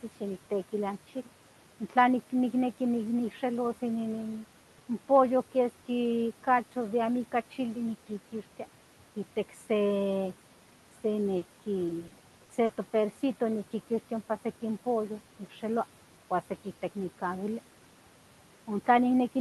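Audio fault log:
throughout: noise suppressor artifacts. The room noise sinks between phrases and swells under the speech, as the suppressor cuts steady noise by about 12 dB.
11.37 to 11.43 s: short concealed packet loss. A brief smear where about 40 ms of audio went missing and was patched by extending the preceding sound before blending back.
11.87 to 12.71 s: repeated packet loss (robotic sound). Choppy sound from five gaps of up to 40 ms each, each filled by continuing the last sound, about a fifth of this span.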